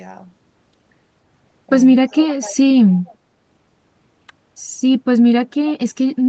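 From 2.06 to 2.62 s the speech is pulled down in level by as much as around 25 dB, for about half a second in all. This is speech suppressed in double talk, likely an echo canceller turning down both its own talker and the loudspeaker echo while they overlap. Here the sound dips in level.

From 3.05 to 3.15 s a faint copy of the speech returns 290 ms late, roughly 30 dB below it. This is an echo leak, likely residual loudspeaker pickup that the canceller missed. Its fixed lag and weak, brief scrap distinguish it from reverberation, which decays smoothly. The audio's top end stops near 8 kHz, consistent with a wideband call codec.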